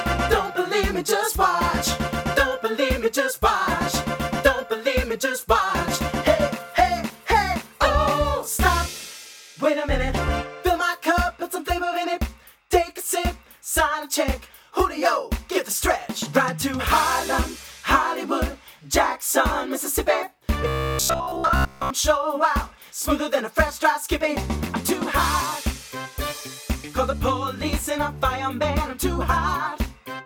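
From 20.68 s to 21.90 s the sound collapses into a rigid, metallic buzz with a fixed pitch of 66.8 Hz. Its rough contour still follows the underlying material. This is robotic sound from repeated short buffers. The likely cause is audio arriving too seldom, so that a block of roughly 15 ms is replayed to fill the gaps, with around two thirds or more of the signal in that stretch being repeats rather than new audio.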